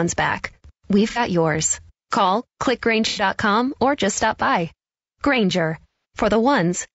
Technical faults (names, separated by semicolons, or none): low-delay AAC compression; AAC frame loss with concealment